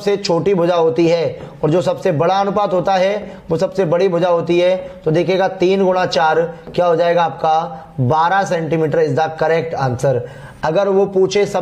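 No technical faults are audible.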